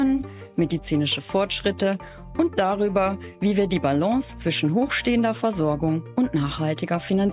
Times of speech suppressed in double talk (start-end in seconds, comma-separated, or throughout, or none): none